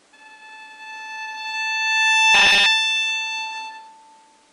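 It's a short clip of sounds, and from 2.34 to 2.66 s it goes into robotic sound from repeated short buffers: a rigid 200 Hz metallic buzz, most likely from a roughly 5 ms chunk being looped over most of that stretch.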